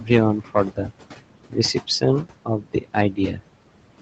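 Noise suppressor artifacts run through the whole clip. The suppressor pulls down whatever bands it reads as steady noise, frame by frame, so the room noise, only about 14 dB under the speech, drops by about 18 dB in the pauses, then rises back under each phrase.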